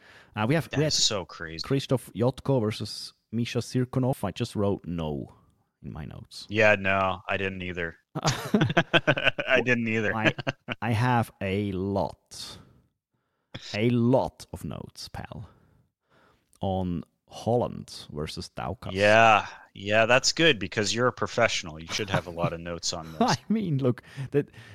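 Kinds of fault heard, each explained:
audio missing between chunks: The recorder likely works in 6-second chunks and dropped a short piece, about 50 ms, while closing one chunk and opening the next, joining the two sides with no gap. At 4.13 s the speech skips abruptly, just before "I just wrote".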